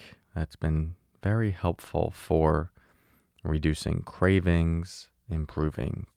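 From 4.53 s to the end, a call bitrate drop makes the speech rough and muffled, consistent with a fall from 64 to about 23 kbps. Unlike packet loss, it has no gaps.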